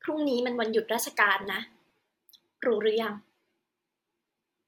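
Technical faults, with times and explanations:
1.44–1.90 s and 3.87–4.47 s, DAB burbling: weak reception lets bit errors slip past the error correction into the MP2 data, at a rate somewhere under one percent, somewhat heavier in the first stretch. Corrupted samples put short blips of noise into single sub-bands, and corrupted scale factors throw sub-bands up or down in level for up to a frame, and the density of the disturbance suggests dozens of hit frames in each burst. Over the speech this comes out as bubbling, watery blips.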